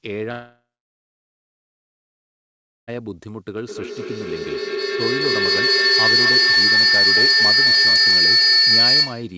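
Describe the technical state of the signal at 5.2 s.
Feedback howl is under way at 5.2 s, part of a span running from 3.63 s to the end at 9.37 s. A microphone-to-loudspeaker loop gains level on each pass, so repeats grow into a whistle near 4 kHz, pulsing about every fifth of a second and peaking about 12 dB above the speech.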